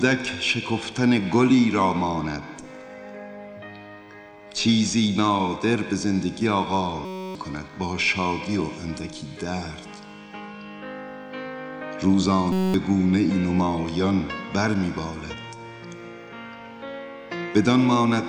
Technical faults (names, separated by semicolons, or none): system hang loop